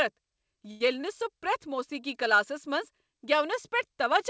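Speech, carried over a call path with nothing above 8 kHz, which fits a wideband codec such as G.722. Two short stalls from a late packet occur. From 0.71 to 0.81 s, one sound is held for about 94 ms. At 1.01 s a second hold lasts 18 ms. Each time a packet arrived late and the jitter buffer ran empty. The receiver stretched the last sound to fill the gap, then resumed. Nothing is lost, but the timing drags, with a slight buzz or dip.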